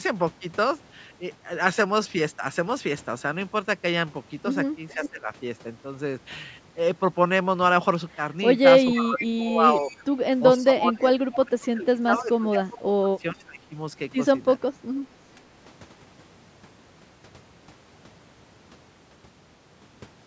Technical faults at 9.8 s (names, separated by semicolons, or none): speech suppressed in double talk; echo leak